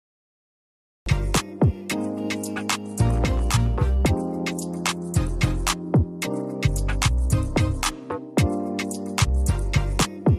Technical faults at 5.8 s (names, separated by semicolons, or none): none